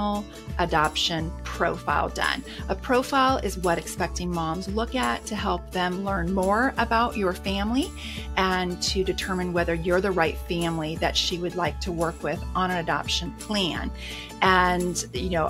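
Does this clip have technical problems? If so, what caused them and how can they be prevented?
Yes, faint clock slip clicks tick steadily about every 70 ms from 0.16 to 15.48 s, likely from two unsynced clocks drifting a few hundred ppm apart. Lock both devices to one shared word clock.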